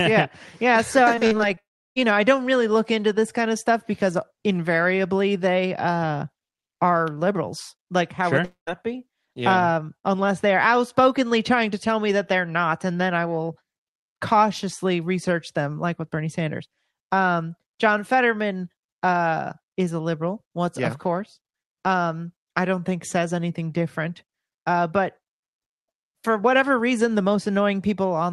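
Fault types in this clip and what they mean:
Repeated packet loss (robotic sound): from 1.15 to 1.59 s, five short holes up to 40 ms are patched, sounding choppy, with repeated, smeared stripes on a spectrogram.
Long network dropout: at 1.59 to 2.05 s and 8.45 to 8.69 s, sound fades into a brief buzz or hiss then silence, likely lost audio; the waveform goes flat.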